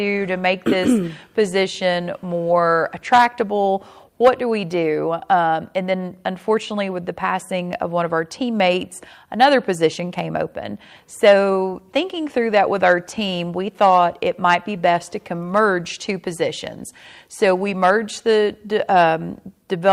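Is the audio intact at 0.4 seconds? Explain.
Yes, the audio is intact at 0.4 seconds, with no dropout, click, distortion or other fault at that point.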